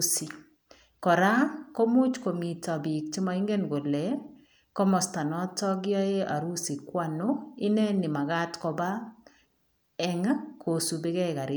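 No technical faults are audible anywhere in the speech recording.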